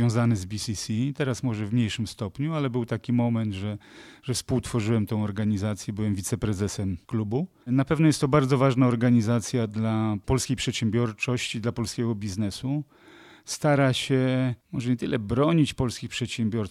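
Speech recording with no technical faults to report.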